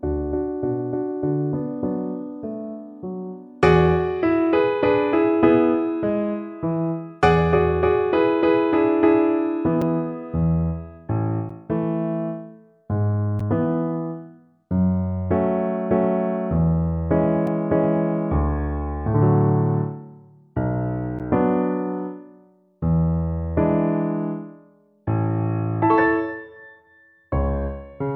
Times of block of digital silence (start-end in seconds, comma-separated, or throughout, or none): 9.82, 11.49, 13.39, 17.47, 21.19